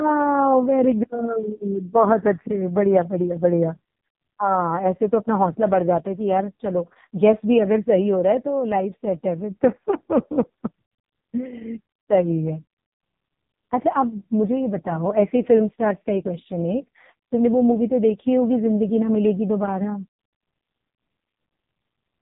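From start to finish, this speech has passed through the AMR narrowband mobile codec. Nothing above 3.8 kHz survives, so sibilants and consonant edges are dull and muffled. The damage is heavy. The sound points to AMR-NB's lowest mode, near 4.75 kbps. At that rate the codec's vocal-tract model gets very few pulses in each 5 ms subframe. The voice comes out buzzy, thin and synthetic.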